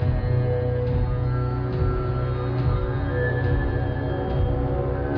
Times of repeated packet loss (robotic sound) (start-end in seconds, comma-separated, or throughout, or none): none